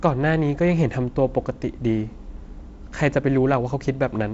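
No faults; the speech carries G.722 wideband telephone coding with nothing above about 7.7 kHz and a light codec texture, which fits the 48 kbit/s mode.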